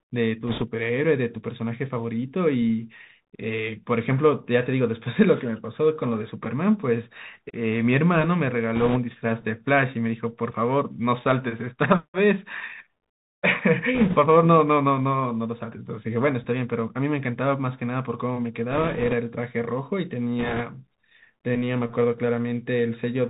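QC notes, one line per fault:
throughout: Bluetooth CVSD headset codec, with plainly audible damage; one-bit delta coding (fits a 64 kbps link) leaves hard spectrogram cutoff at 4 kHz, scratchy s sounds, and granular hiss.
0.47–0.63, 8.75–8.98, 13.95–14.17, 18.71–19.14, 20.39–20.62: bit errors on a Bluetooth voice link, flipped bits at a few percent, heard as rushing crackle; spectrogram shows broadband speckle bursts, waveform no spikes.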